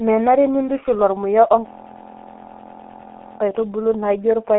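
From start to finish the speech carries heavy G.723.1 codec damage: everything sits between roughly 250 Hz and 3.5 kHz, nothing above 3.8 kHz, and the slow 30 ms frame updates leave it muffled, hoarse and smeared on consonants, which fits a 6.3 kbit/s rate.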